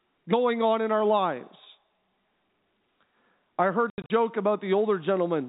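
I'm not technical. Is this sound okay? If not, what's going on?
No. Between 3.9 and 4.1 s the speech breaks up into several short holes of dead silence, adding up to 140 ms, the longest lasting 80 ms. This is packet loss filled with silence: chunks of the call's data never arrived, and the receiver played nothing in their place. The holes fit lost 20 ms packets, and each one starts and stops abruptly. Patched-over loss would smear or repeat sound instead, but these are silent, hard-edged gaps. The rest of the clip has the narrow, phone-like sound of ordinary G.711 telephone coding.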